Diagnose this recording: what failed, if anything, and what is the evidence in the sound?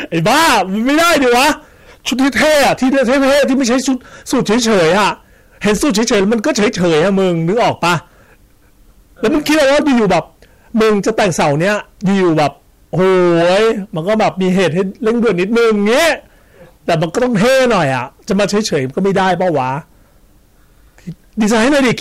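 Hard clipping runs through the whole speech clip, and it's heavy. The signal is driven roughly 24 dB past what the stage can pass, so something like a third of the samples get sliced flat at the ceiling. That's why every loud syllable turns into harsh fuzz rather than occasional crackle. Those squared-off peaks throw harmonics high up the spectrum. That points to a gain stage set far too hot going into the converter or a fixed-range sample format.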